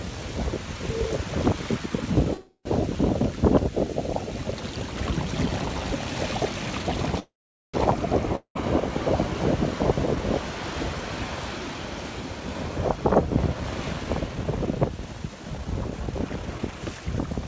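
At 2.34 to 2.67 s and again at 7.19 to 7.76 s there is a call audio freeze: the last sound carries on as a fading buzz, then silence, about 80 ms in the first and 440 ms in the second. The likely cause is delayed packets draining the jitter buffer. The audio then resumes exactly where it stopped, so nothing is lost and the later audio is pushed back.

From 8.36 to 8.57 s a long network dropout sounds similar, a short fading tail and about 90 ms of silence. Unlike the freezes, the audio returns further on, with about 200 ms likely lost rather than delayed.

From 12.40 to 17.42 s a jitter buffer speed-up runs the audio at 115% of normal pace with unchanged pitch, trimming away roughly 0.7 s in total. The sound comes across as hurried, not broken by gaps. Throughout, the call path leaves nothing above 8 kHz, which fits G.722 at 64 kbps.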